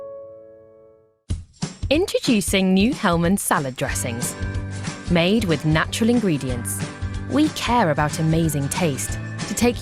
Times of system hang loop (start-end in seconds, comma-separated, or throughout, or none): none